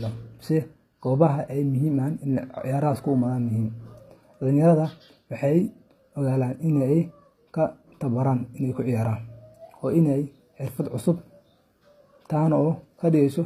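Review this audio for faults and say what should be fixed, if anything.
Throughout, the speech treble sounds synthetic and gritty, with nothing above 15.4 kHz, likely HE-AAC compression rebuilding highs by band replication at what sounds like around 24 kbps. Encode at a higher bitrate or with plain AAC so the treble is coded directly.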